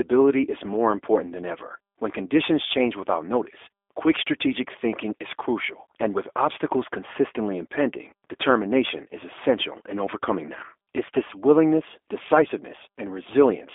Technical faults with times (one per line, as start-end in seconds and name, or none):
0.00-13.75 G.729 codec